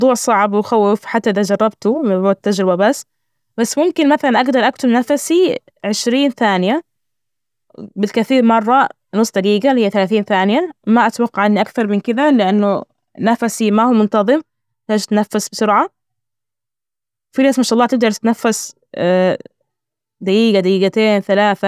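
Nothing in this speech recording calls for comment: there are no dropouts, glitches or other technical faults to flag anywhere along the way.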